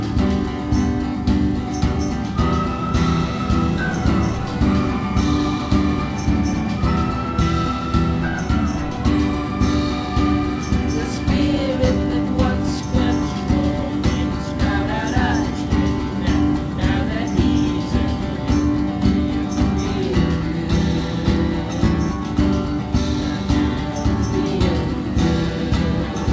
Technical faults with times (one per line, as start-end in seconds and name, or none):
none